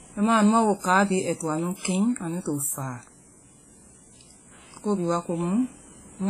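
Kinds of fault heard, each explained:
WMA compression: the speech rings and sounds washy throughout, with a hiss that breathes along with the voice, and likely comes from a low-bitrate transform codec, consistent with about 24 kbps. A spectrogram shows nothing above 15.2 kHz, smeared transients and speckled gaps where weak components vanished.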